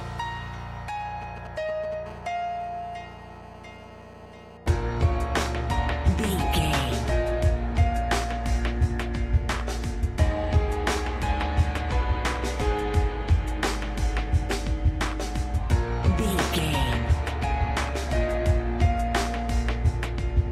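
From 1.22 to 1.94 s a galloping dit-dit-dit of ticks and brief buzzes cuts across the sound, sitting roughly 15 dB below it. These are GSM signalling bursts: a 2G phone close to the equipment is exchanging short groups of radio bursts with the network, as happens before a call or message comes in. The audio circuitry rectifies each group, and the pulses inside repeat at about 217 Hz, which gives each tick its short buzzy edge.

Almost immediately after, from 2.06 to 4.57 s, a hard, raspy buzz takes over, continuous and with no relation to the programme material, at about 24 dB below the signal. This is GSM phone buzz: a phone is now in a call, transmitting a steady stream of bursts 217 times a second. The circuitry demodulates that on-off radio envelope into a 217 Hz tone, and the sharp burst edges add a dense stack of harmonics that make it sound so grating.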